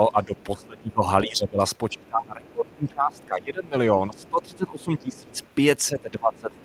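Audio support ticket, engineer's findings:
Speech suppressed in double talk, 0.08 s to the end: talker dips and thins out while the far side speaks, deepest drops around 20 dB down. Likely the echo canceller failing to separate near talker from loudspeaker echo, so it ducks both.

Other side's voice leaking through at 0.36 to 0.63 s, 1.76 to 3.26 s, and 4.16 s to the end: faint far-end voice underneath, roughly 30 dB below the talker. Likely leftover loudspeaker echo the canceller didn't fully remove from the mic.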